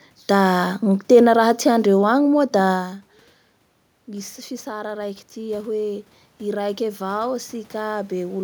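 From 4.06 s to 8.39 s the speech and the room noise behind it swell together, climbing by about 9 dB over those four seconds. This is automatic gain rising: after the talker moves away from the microphone at around two and a half seconds, the level reaching it drops by about 16 dB, and the gain control responds by slowly turning itself up, lifting the background along with the voice.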